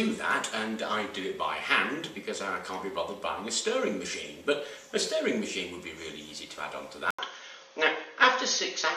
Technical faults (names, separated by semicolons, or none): input switched to a poorer device